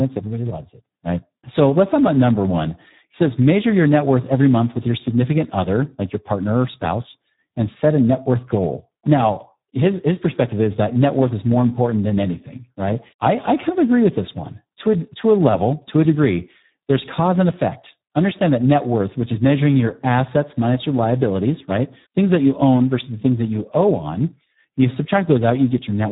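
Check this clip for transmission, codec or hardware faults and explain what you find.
One codec fault runs through the whole recording. It is Speex codec damage, and it is heavy. Throughout the speech, Speex's CELP coder has very few bits for the excitation, which fits an 8 kbps setting. The voice sounds noisy, hoarse and close to robotic. Nothing is heard above 3.8 kHz.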